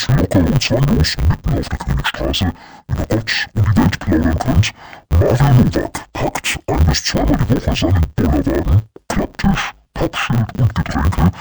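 From start to finish the speech carries an interleaved audio read as planar fault. Each 10 ms block of alternating left and right samples is split in the wrong place, so the first half lands in the left channel and the second half in the right, each stretched to double length. The pace holds, but with blocks this short the result is dull and robotic, with a steady 100 Hz buzz at the block rate rather than a clear octave drop.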